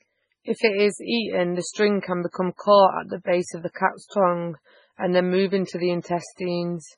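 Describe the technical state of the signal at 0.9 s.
MP3 compression artefacts are present at 0.9 s and throughout the speech. The audio stops dead above 10.5 kHz, and weak spectral detail drops in and out frame to frame, giving a watery, swirly texture with smeared attacks, likely from a very low bitrate near 16 kbps.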